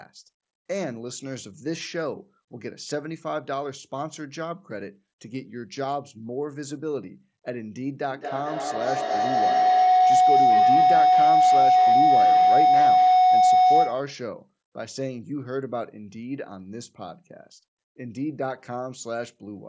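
From 8.11 s to 14.26 s a feedback howl forms: sound loops from loudspeaker to microphone, gaining level each trip, narrowing to a roughly 700 Hz tone that pulses about every fifth of a second and peaks about 11 dB above the speech. Echo fades; this grows.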